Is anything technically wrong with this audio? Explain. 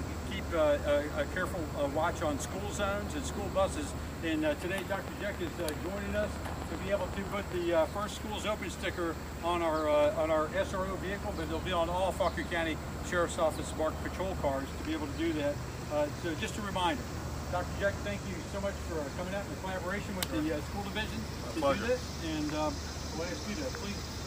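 Yes. From 4.95 s to 7.53 s there is a train of clicks: a run of about 20 near-identical pulses at a steady 7.8 per second, evenly spaced, with peaks about 10 dB above the surrounding sound. The regular, repeating pulse shape likely comes from electrical interference from nearby equipment or a faulty connection or power supply. It is heard as a rapid, even ticking laid over the audio, continuing through any quieter moments.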